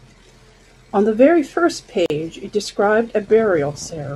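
At 2.06 s the speech just drops out for about 40 ms, until 2.10 s, then picks up exactly where it left off. That's a gap at a join of encoded pieces: the audio was encoded in separate chunks and stitched back together without trimming, so the encoder's start-up silence and end-of-chunk padding both survive at the seam. The codec smears the edges, so the fully silent part is shorter than that. The joins come every 6 seconds, so only this one falls inside the clip.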